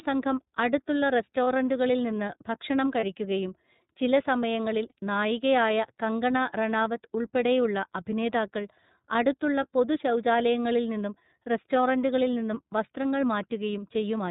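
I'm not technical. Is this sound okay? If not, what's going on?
No, not quite. The whole recording has gone through the iLBC codec, a phone-call format that cuts off everything above 4 kHz. That's why the speech sounds a bit muffled, rough and slightly robotic all the way through, and the damage is easy to hear.

There are also three short dropouts from lost iLBC frames, at 1.44 s, 3.0 s and 4.89 s, each about 30 ms long. A bit of audio went missing each time, and the decoder filled the hole by repeating the last sliver of sound, so you get a brief buzzy, held blip before the speech picks straight back up.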